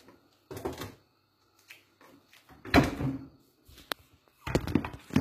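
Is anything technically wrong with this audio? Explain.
Yes. Throughout, the treble sounds gritty and metallic, with bright highs that don't quite match the body of the sound, and nothing above about 14.9 kHz. The likely cause is HE-AAC compression at a low bitrate, around 20 kbps, where spectral band replication rebuilds the treble from copied lower bands.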